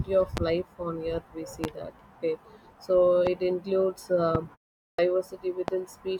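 Speech recording carrying five loud pops, at 0.37, 1.64, 3.27, 4.35 and 5.68 s, each a single sharp transient of about 30 ms peaking about 15 dB above the speech, which continues underneath. These are likely voltage pulses from a switch, static discharge or driver glitch. A clipped start after a pause follows a 0.42 s silence: speech resumes abruptly at 4.99 s with its first 85 ms (from 4.90 s) swallowed, as the output device, having dropped into sleep, needs that long to wake and lock again.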